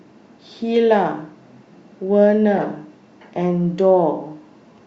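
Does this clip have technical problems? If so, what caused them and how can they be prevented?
Yes. A corrupt frame decoded fault occurs from 2.57 to 2.64 s: flipped bits in a few consecutive compressed frames were played anyway, so misread codes and gains spray energy at wrong frequencies, giving a sharp burst peaking around -10 dBFS. Error detection with frame concealment prevents it.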